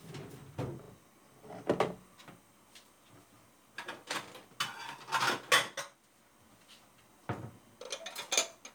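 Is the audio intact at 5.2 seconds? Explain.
Yes, the audio at 5.2 seconds is intact, with no dropout, click, distortion or other fault at that moment.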